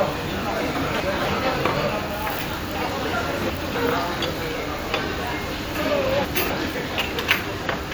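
Chunks out of order occur at 0.75–1.25 s, 2.75–3.75 s and 5.75–6.5 s. A 250 ms chunk arrives late by one, three and two chunks respectively and plays after its successors, so each span sounds jumbled, with three hard joins.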